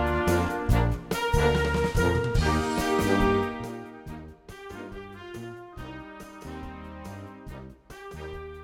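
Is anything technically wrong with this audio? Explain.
Yes. From 3.36 to 3.73 s a fine ticking, zipping texture rides on the sound as the level drops by about 15 dB. This is zipper noise. The gain is lowered in small discrete jumps, around 70 a second, instead of gliding smoothly. Each jump slightly breaks the waveform and leaves a tiny click, and that rapid string of clicks forms the buzzy zip heard through the fade.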